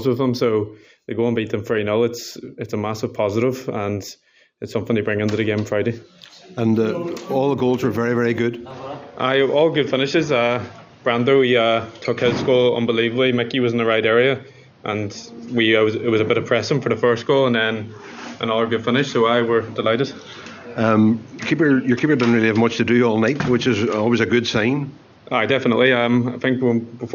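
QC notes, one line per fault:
8.70 s to the end, input switched to a poorer device: the sound abruptly turns duller and more boxy, with nothing above 6.7 kHz from that point on. A new, faint background noise appears, some 30 dB below the signal, while the level stays about the same and there is no gap at the change. This likely comes from the recording input moving mid-take to a narrower-band microphone or a headset's call profile with its own tone.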